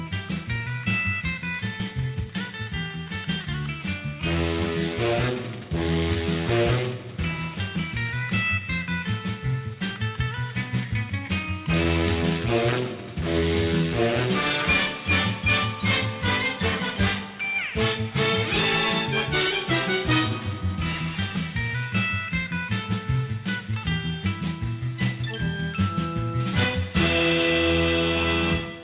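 Aliasing runs through the whole clip. The audio was downsampled, likely from 44.1 kHz to 8 kHz, without a proper low-pass filter first. Content above 4 kHz folds back below it. Sibilant and bright sounds turn gritty and metallic. The folded energy sits roughly 15 dB below the signal, pressing right up to the band edge.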